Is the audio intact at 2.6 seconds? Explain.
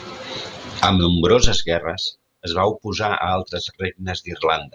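Yes, the speech at 2.6 seconds is intact, with no audible fault at that moment.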